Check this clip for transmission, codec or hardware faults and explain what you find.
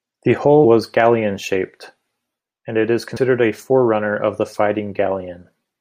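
One codec fault turns up. At 3.16 s, compressed frames are skipped: the decoder loses a run of frames, which fits about four 24 ms frames, so the speech jumps ahead roughly a tenth of a second.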